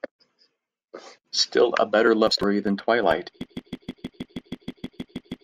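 From 3.46 s to the end, the speech turns into a rapid, machine-gun stutter as one 0.16 s fragment repeats twelve times back to back, a broken-record loop. The stream likely stalled and kept resending its last piece, losing the audio meant for that stretch.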